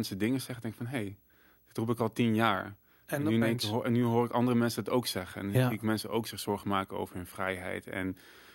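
Throughout, the speech carries video or display buzz from a screen or video cable coupling into the audio: a 59.94 Hz field-rate buzz with hash above it and a 15.7 kHz line tone, roughly 35 dB below the speech. The line tone and hash set it apart from mains hum.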